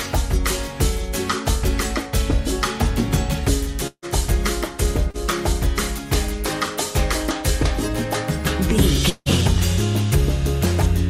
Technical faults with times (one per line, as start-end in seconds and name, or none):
3.87-4.05 long network dropout
5.10-5.17 short concealed packet loss
9.10-9.29 long network dropout